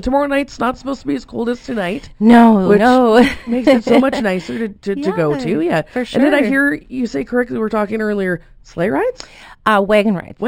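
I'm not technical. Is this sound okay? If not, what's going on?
No. The audio was converted from a low sample rate to a higher one with a crude method, giving imaging from linear upsampling. The new in-between points were filled by joining existing points with straight lines, which fits a source recorded at about 12 kHz. Through the whole clip the highest sounds are dulled, and faint mirrored copies appear between 6 kHz and 12 kHz, adding a light metallic shimmer to hissy and high-pitched moments.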